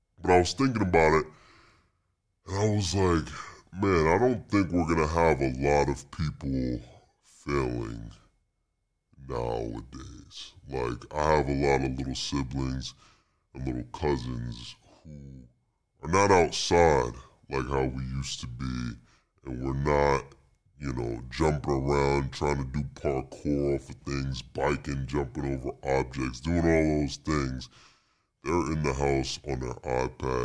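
The speech drags low and slow throughout, at 0.69 speed and 6.45 semitones down, which fits a wrong sample rate: 32 kHz audio played at 22 kHz.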